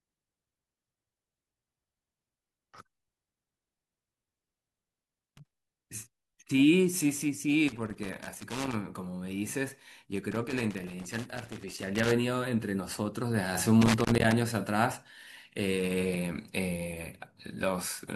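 At 5.04 to 5.54 s, 7.68 to 8.75 s, 10.32 to 12.12 s and 13.82 to 14.32 s the speech breaks into loose connector crackle: a worn contact keeps making and breaking, chopping the signal and throwing in irregular scratchy bursts.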